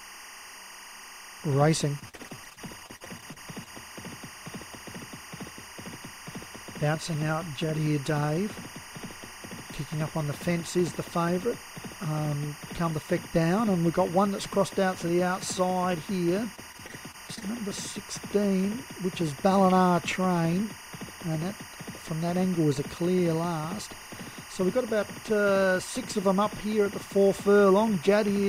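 Timecode bleed runs through the whole audio as a chirping warble well below the main sound, switching between tones near 1 and 2 kHz at a 24-frame rate. On a spectrogram it shows as two steady bright lines. Repeated packet loss (robotic sound) makes the audio choppy from 1.99 to 3.68 s and from 16.55 to 17.43 s. Bursts of short gaps, up to 50 ms, are patched by stretching the last sound, which shows as smeared, repeated blocks in the waveform.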